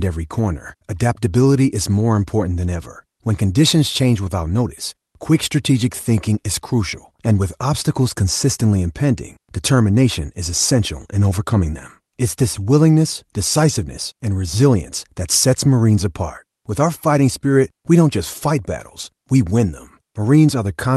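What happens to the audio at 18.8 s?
Nothing goes wrong at 18.8 s: the speech carries on intact through the call path, with no dropout, glitch or other disruption at that moment.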